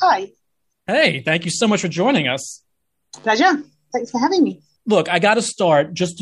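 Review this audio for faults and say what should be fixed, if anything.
A dropped buffer (overrun) is the likely cause at 1.25 s, just before "thank you so much": the capture side did not read its samples before the hardware wrote over them, so a few milliseconds of audio were lost and the surrounding pieces were butted together. What you hear is a tiny jump in the speech, not a gap of silence. Preventing it means giving the capture thread higher priority or a larger buffer so reads keep pace with the hardware.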